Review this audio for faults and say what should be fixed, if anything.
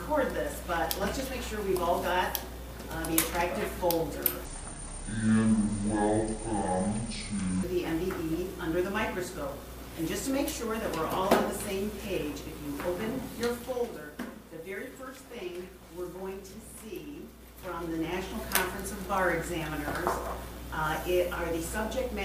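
From 4.45 s to 7.63 s there is a section at the wrong speed: the sound plays at 0.574 times its original rate, dropping close to ten semitones and dragging noticeably, likely from this segment being resampled or clocked at the wrong rate. Confirm that every segment's sample rate matches the session rate before editing or playback.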